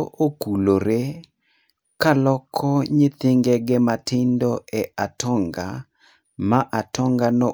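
Speech recording with no audible technical faults at any point.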